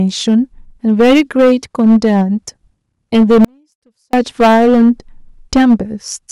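From 3.45 to 4.13 s the speech drops out abruptly to a very faint residue, likely a broken signal path that stayed live, unlike a natural pause or fade.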